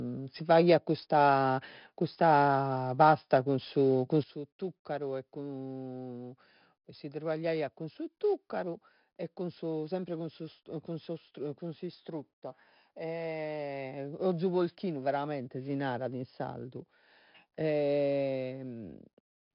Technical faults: 4-bit ADPCM compression; sudden gain jump

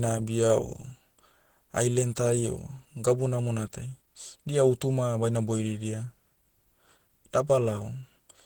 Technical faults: Opus compression

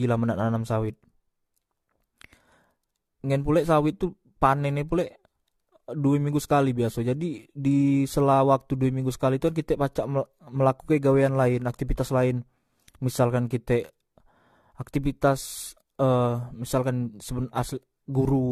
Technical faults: generation loss

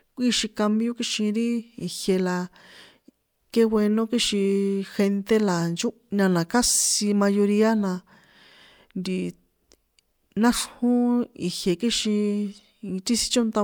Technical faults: none

